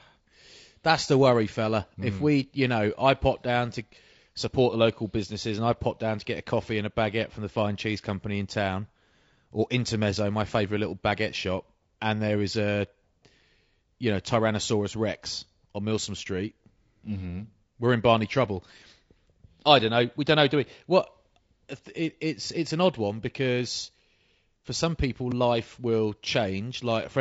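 Throughout, low-delay AAC compression, likely AAC-ELD at a rate near 32 kbps, smears the pitch harmonics, leaving the speech plainly rough and grainy.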